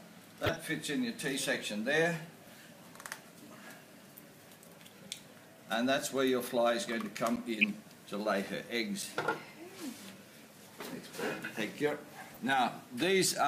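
The audio has two kinds of fault. DAB burbling occurs from 0.45 to 0.57 s, 7.61 to 7.64 s and 12.34 to 12.52 s. Short blips of noise sit over the sound there. Weak reception lets bit errors, a fraction of a percent, slip into the MP2 data and corrupt single sub-bands. Blocks of digital silence fall at 7.36 s, lasting 10 ms, and 9.02 s, lasting 5 ms. Each is a hard cut to silence and back, heard as a tick. The output buffer was likely not filled in time.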